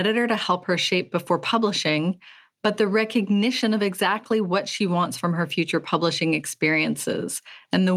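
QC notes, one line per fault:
Nothing to flag on this speech clip; I heard no faults anywhere in it.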